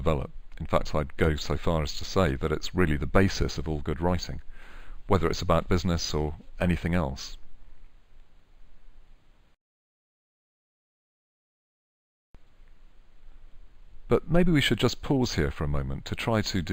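No technical faults occur at any point in the clip, so there is nothing to describe in time order.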